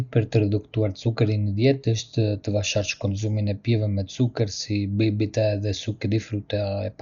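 Right from the start and all the way through, the speech sounds dull and boxed-in, with nothing above about 6.9 kHz, and there's a rough, fluttering hiss clinging to the voiced sounds. That's most likely heavy Dolby Digital compression: starved of bits, which fits a bitrate around 48 kbps, the encoder narrowed the band and left many frequency lines without mantissa data, so the decoder filled them with dither noise. That noise is the grainy flutter you hear.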